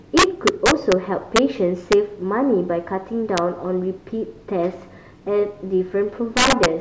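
Integer overflow strikes the speech five times. The first runs from 0.18 to 0.92 s, about 4 dB over the limit. Short bursts follow at 1.36 to 1.39 s, about 2 dB over, and at 1.92 s and 3.38 s, just at the limit. The last, about 6 dB over, spans 6.37 to 6.66 s. The gain stage wraps instead of saturating. Each peak past full scale jumps to the opposite sign. The result is harsh cracks, far sharper than clipping.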